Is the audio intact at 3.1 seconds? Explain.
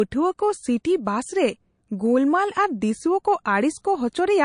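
No. At 3.1 s, as across the whole clip, the speech carries plainly audible MP3 compression damage, likely from a low bitrate near 40 kbps: weak spectral lines flicker between frames giving a watery, swirly texture, and s sounds chirp metallically.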